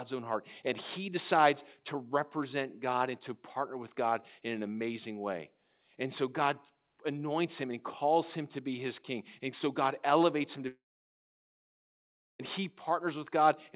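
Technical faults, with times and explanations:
10.68 to 12.41 s, long network dropout: right after "elevates him to", the sound smears into a short buzzing tail that fades away, leaving about 1.6 s of near silence before the audio picks up again with 1.72 s of material gone. The likely cause is a stall in arriving packets. The receiver briefly stretched the last sound, then fell back to silence, and nothing was recovered afterwards. Throughout the clip, nothing is heard above 4 kHz, which fits a narrowband G.711-style call path.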